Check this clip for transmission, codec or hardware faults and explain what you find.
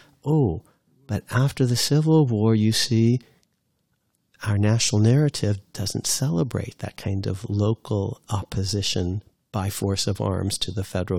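I find no faults to report in this clip.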